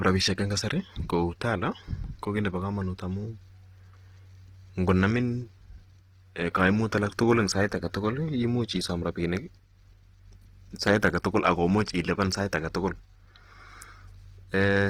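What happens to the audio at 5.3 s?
At 5.3 s the speech carries the same Opus compression heard throughout the clip. The damage is plainly audible: tones turn grainy and rough, and noise fills in thin spectral detail. This likely comes from CELT-mode coding at a low rate near 16 kbps. Bandwidth still reaches about 20.2 kHz.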